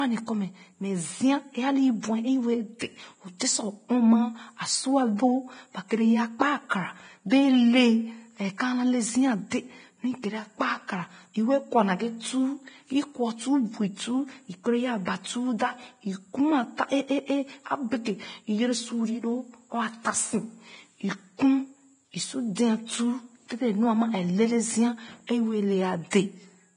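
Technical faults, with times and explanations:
Throughout, Vorbis compression: the speech sounds hissy and grainy, with roughened tones and softened consonant attacks, and nothing is present above 9.7 kHz. This is likely heavy low-bitrate Vorbis coding, consistent with a rate around 23 kbps. The encoder cuts the top band away entirely and quantises the remaining treble so coarsely that fine detail is replaced by noise of similar energy, which gives the grit.
2.79 s and 15.05 to 15.07 s, pre-echo: each time, a short smear of hiss arrives just before a sharp onset, spreading about 18 ms ahead of the first attack and about 21 ms ahead of the second, so both attacks sound blunted. The transform codec spreads quantisation noise evenly across a coding block. Where a loud transient sits late in a block, noise sized for that loud part also fills the quiet moment before it.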